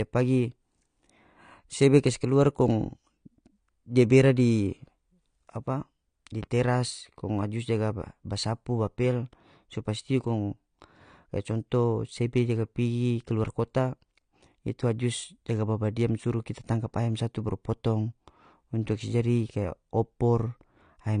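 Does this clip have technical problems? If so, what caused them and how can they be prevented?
Yes. The speech is dull and smeared throughout, with a warbling, fizzy edge on sibilants and nothing above 9.8 kHz, likely AAC compression at a low bitrate, which fits about 32 kbps. On a spectrogram the energy stops flat at that line, with blotchy holes below it. Encoding at a higher bitrate prevents this.

A single loud pop sits at 6.43 to 6.46 s, rising a few decibels above the speech, which carries on underneath. It is likely from a connector, switch or static discharge. On the waveform it shows as one sharp spike, and on a spectrogram as a thin vertical stripe through all frequencies. Secure cables and switch nothing during recording to prevent it.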